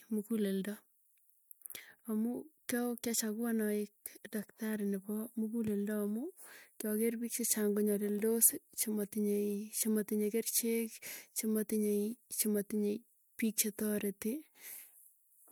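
No technical faults can be heard anywhere in the recording.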